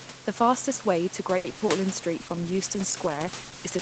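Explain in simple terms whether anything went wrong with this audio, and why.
Two things go wrong. Right after "fastest way to", from 1.37 to 1.70 s, there is repeated packet loss: four short pieces of sound vanish in quick succession, the longest about 70 ms. Each hole is patched by stretching the previous sound, so the voice turns choppy. Unlike a single dropout, it stutters several times in a row.

From 2.22 s to the end, there is a call bitrate drop. The call has far less data to carry the voice, so the speech is coded more crudely and sounds rough and watery. Nothing drops out here, unlike the packet loss. The sound keeps flowing but at lower quality.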